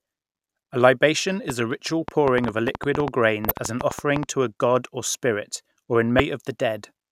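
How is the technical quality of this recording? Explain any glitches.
The recording has two separate problems: a burst of clicks early on and two short decoding glitches.

A train of clicks runs from 1.50 s to 4.24 s, ending just before "to a god or". Something in the chain, likely interference from nearby equipment or a faulty connection or power supply, kept injecting short pulses at about 7.5 per second, unevenly spaced, about 20 in all. Each pulse has much the same shape and peaks about 15 dB above the speech, so the result is a sharp, uneven ticking that sits on top of the talker and carries through the gaps between words.

Damaged data in a compressed stream causes a glitch at 3.48 to 3.51 s and another at 6.17 to 6.20 s, just after "god or spirit or". At these points the encoded bytes were corrupted. The decoder misread those frames, lost its place and had to hunt for the next valid frame header. 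Each event lasts roughly 30 ms and comes out as a brief chirp, squawk, click or short hole.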